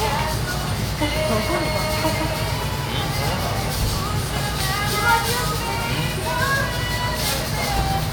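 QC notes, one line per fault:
No fault to note.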